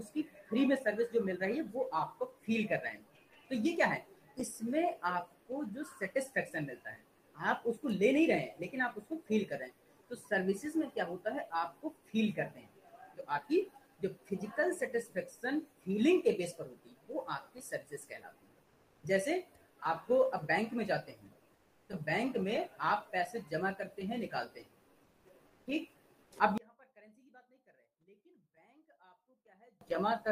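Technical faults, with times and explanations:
26.58–29.81 s: one channel inverted, likely; when summed to mono the shared content cancels, dropping the level by about 33 dB and leaving only a faint residue.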